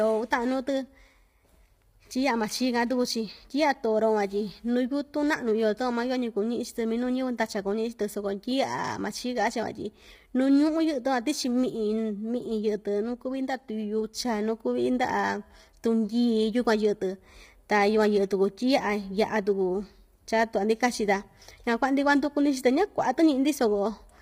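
From the start and throughout, the speech carries heavy low-delay AAC compression damage, likely from AAC-ELD at a low rate that fits around 24 kbps. The low bitrate leaves the pitch harmonics coarsely coded, so the voice sounds rough and grainy, with noise filling the gaps between harmonics. On a spectrogram the harmonic stripes look smeared and speckled, and the top band looks thin and synthetic.

At 3.12 s there is a single sharp click from dropped samples, likely a handful of samples missing from the stream. Only a tiny fraction of a millisecond is lost, far too little to remove any sound, but the waveform jumps abruptly from one value to a later one instead of continuing smoothly. On a spectrogram this shows as one thin vertical line running across the whole frequency range, and on the waveform as a small step discontinuity.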